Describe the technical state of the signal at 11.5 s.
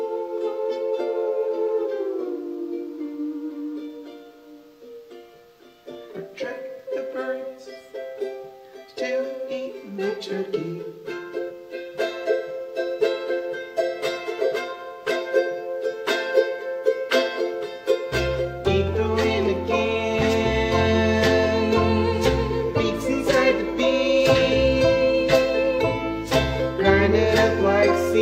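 Damaged data in the compressed stream runs from 11.46 to 11.50 s: the decoder misreads the corrupted frames and loses sync, giving a brief chirp, click or dropout.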